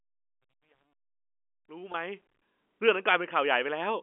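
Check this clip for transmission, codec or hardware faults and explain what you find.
One transmission fault is audible: packet loss with pitch repetition at 1.92 to 1.94 s, in speech over a telephone-band G.711 line passing roughly 250 Hz to 3.5 kHz. About 20 ms of audio went missing, which fits a single lost packet. The receiver filled the gap by repeating the last pitch period, so the sound briefly holds as a slightly buzzy, sustained tone. A plain dropout would leave a silent hole or a click instead.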